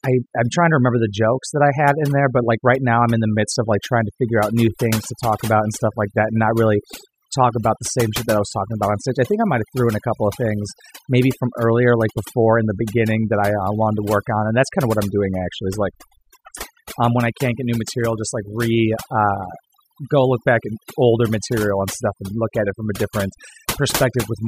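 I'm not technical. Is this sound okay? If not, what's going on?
No. Throughout the speech there is overdone noise removal: a cleanup tool set too strong wipes out background and quiet voice detail together, leaving near-silence with twinkling specks. Unlike plain hiss, the background isn't steady; it sparkles and drops away.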